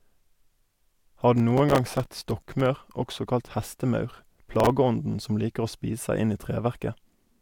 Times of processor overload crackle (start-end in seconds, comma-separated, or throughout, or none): 1.35-2.66, 4.53-4.77